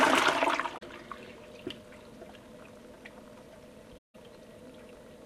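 AAC frame loss with muting occurs at 0.77 s and at 3.97 s. Missing frames were decoded as silence, and the overlapping windows fade the sound out and back in. The 43 ms loss is a brief dip; the 171 ms loss leaves a soft-edged hole.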